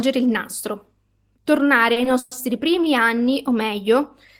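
At 1.93 to 1.98 s there is a short stall from a late packet. The jitter buffer ran empty, so the receiver held the last sound for 30 ms until the packet arrived, then resumed from the same point. Nothing is missing, but playback now runs 30 ms later.

From 2.19 to 2.33 s a call audio freeze stretches the last sound into a buzz or hiss for 120 ms, without falling to silence, before the speech picks up where it stopped. This was likely caused by delayed packets draining the jitter buffer. Nothing is missing, and the delay grows by a further 120 ms.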